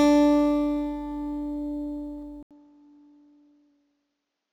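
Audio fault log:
2.43–4.53 s, input switched to a poorer device: after an 80 ms gap the sound turns duller and a few decibels quieter over a faint new noise floor, likely from a narrower-band input. The spectrogram shows nothing above 7.4 kHz; the waveform shows a brief gap, then lower amplitude.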